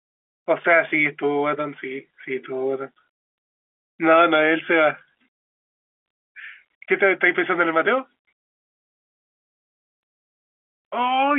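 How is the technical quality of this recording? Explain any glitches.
No glitches can be heard in the speech; the signal carries the narrow 250 Hz to 3.4 kHz band of G.711 telephone coding, with only the faint level-following grain that format leaves.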